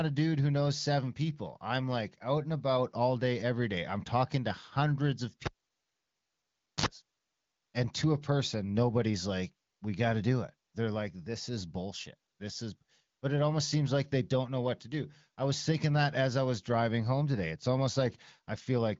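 At 5.46 s a pop gives way to near silence, then a brief 50 Hz buzz and another pop at 6.86 s: a cable pulled and plugged in.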